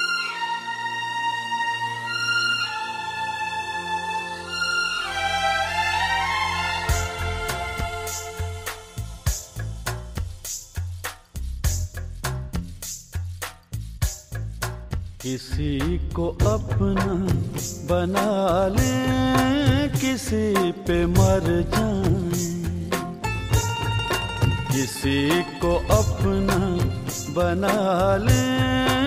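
From 14.84 to 17.26 s the sound turns dull and muffled, with the top end rolling away smoothly rather than cutting off sharply. This is de-emphasis applied wrongly: a treble cut intended to reverse pre-emphasis was applied where none existed or was applied twice, leaving 10 kHz about 8 dB below 1 kHz.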